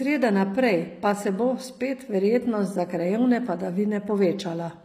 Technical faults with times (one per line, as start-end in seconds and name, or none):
0.00-4.84 HE-AAC compression